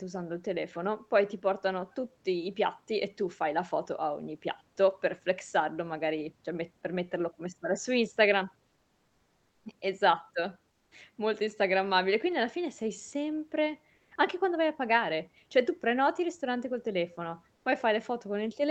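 At 8.67 to 9.65 s, then 10.71 to 10.91, 13.95 to 14.11 and 17.55 to 17.65 s, the pauses get comfort noise in place of the background: the real room tone turns flat and featureless, about 2 to 3 dB quieter, likely from Opus DTX filling the gaps.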